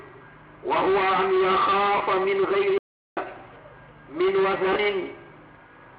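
At 1.97 s and again at 4.73 s, lost LE Audio frames leave about 30 ms gaps. The LC3 decoder repeats the last spectrum with scrambled signs. Each gap becomes a brief noisy smear.

From 2.78 s to 3.17 s a playback stall cuts the sound for about 390 ms. It then resumes. A player starved of data is the likely cause.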